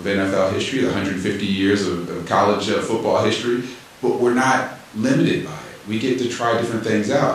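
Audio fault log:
No faults heard anywhere in the speech.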